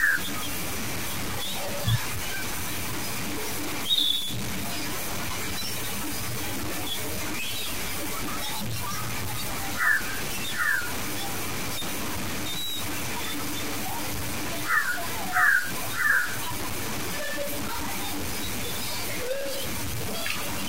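From start to end, the speech is coated in a harsh, grainy distortion. The grit rises and falls with the voice rather than sitting steady underneath it. Quiet syllables break up badly, and the softest moments drop out or sputter. The distortion is roughly as loud as the speech itself. The likely cause is low bit depth without dither, with the audio truncated to about 4 bits. The rounding error then tracks the signal closely.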